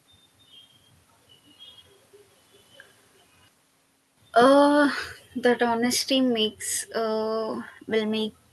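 Automatic gain falling from 4.40 s to 6.64 s lowers this speech clip by about 6 dB. The gain control judged the input too loud or its background noise too strong and backed its gain off step by step, so the voice and the room noise behind it sink together. The earlier level shift near 3 s is the talker moving, and the top end stopping near 12 kHz points to a call codec.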